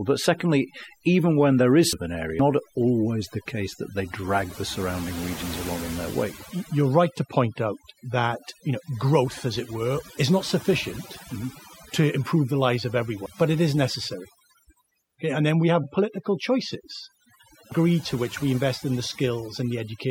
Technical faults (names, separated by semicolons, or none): overdone noise removal; compressed frames skipped